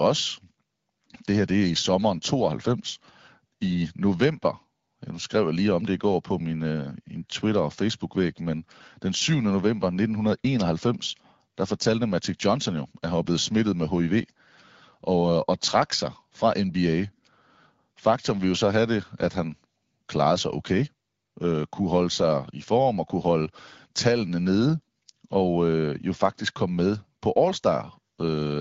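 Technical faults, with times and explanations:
No technical faults; the speech is carried over the AMR wideband (HD Voice) codec at 12.65 kbit/s, a rate at which the codec keeps speech clear.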